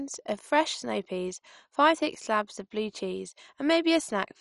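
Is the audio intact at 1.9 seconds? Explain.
No. At 1.9 s, as throughout the clip, there is MP2 compression damage, likely from a bitrate around 48 kbps: with too few bits, upper sub-bands drop out entirely, leaving nothing above 11.3 kHz, and the remaining bands are coarsely quantised, giving dull, gurgling, granular speech.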